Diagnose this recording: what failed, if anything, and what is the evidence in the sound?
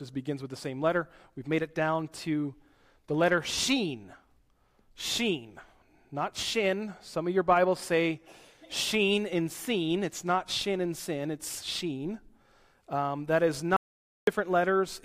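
Near the end there's an audio dropout to silence. From 13.76 s to 14.27 s the sound stops dead and then picks up again mid-flow, about half a second gone. The gap is silent with no room tone or hiss underneath, so the recorder kept writing samples while its input had vanished. That points upstream of storage, most likely a momentary loss at the input device or its link rather than anything in encoding.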